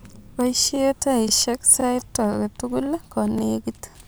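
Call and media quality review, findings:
Overlapping chunks: stutter clicks at 0.24, 0.76, 1.29, 1.81, 2.34, 2.86, 3.39, 3.91 s. The chunker starts each 0.5 s block 25 ms early, so that slice replays at every join.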